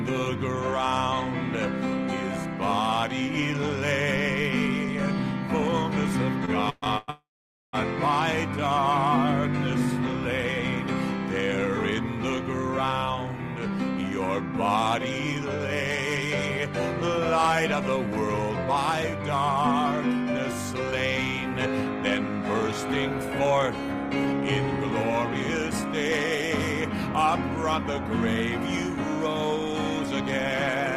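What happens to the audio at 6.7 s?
From 6.45 to 7.10 s the audio hits repeated stalls (stutter). The jitter buffer ran empty four times, and the last sound was held to fill 264 ms, longest gap 125 ms. Nothing is lost, but it drags. Spectrograms show smeared, frozen bands; waveforms show repeated, fading stretches.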